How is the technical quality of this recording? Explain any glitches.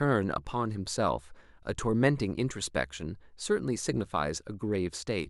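Nothing to flag here; the speech comes through without any glitches worth mentioning.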